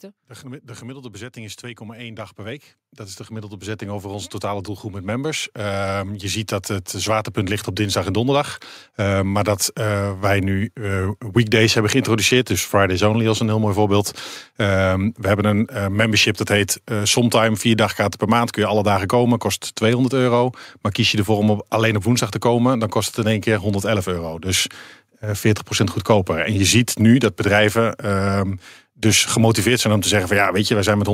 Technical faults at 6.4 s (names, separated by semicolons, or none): automatic gain rising